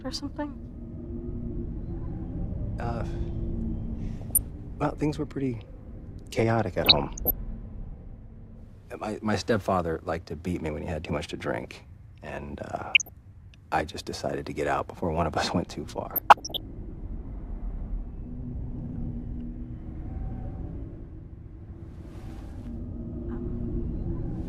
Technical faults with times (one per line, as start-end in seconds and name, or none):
4.17-4.46 DAB burbling
6.83-7.31 DAB burbling
12.93-13.09 DAB burbling
16.11-16.61 DAB burbling